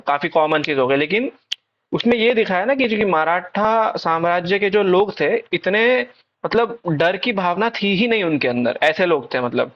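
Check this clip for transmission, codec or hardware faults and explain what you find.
I found no faults in this clip.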